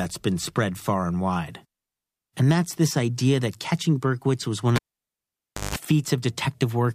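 Just after "was one", at 4.76 s, the cable is pulled and plugged in: a pop, 0.95 s of near silence, 170 ms of 50 Hz mains buzz while only the tip touches, then another pop at 5.76 s. The waveform shows spikes flanking a flat gap. The spectrogram shows stacked 50 Hz harmonic lines.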